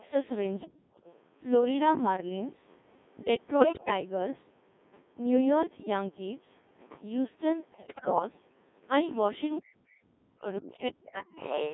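Throughout, the speech passes through a Codec 2 vocoder at 1.6 kbit/s, which keeps only pitch, voicing, energy and spectral envelope and rebuilds everything from sine waves within roughly 150 Hz to 3.6 kHz. The result is a heavily buzzy, robotic voice.

From 0.65 to 0.99 s, speech is suppressed in double talk, likely because an echo canceller confused the talker with loudspeaker echo and turned the voice down by a very deep amount.

Overlapping that, from 0.94 to 1.18 s, the other side's voice leaks through faintly. This is likely residual loudspeaker echo the canceller missed.

From 3.60 to 3.91 s, and again from 7.72 to 8.22 s, bit errors on digital voice radio corrupt the vocoder's frame parameters at a high rate. The voice lurches in pitch and level and breaks into warbles and robotic gibberish.

From 11.38 s to the end, the other side's voice leaks through again, this time nearly as loud as the talker, likely from uncancelled loudspeaker echo.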